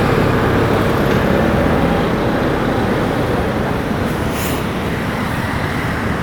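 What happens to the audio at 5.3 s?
Nothing goes wrong at 5.3 s; the sound plays through that moment intact, with no dropout, click or distortion.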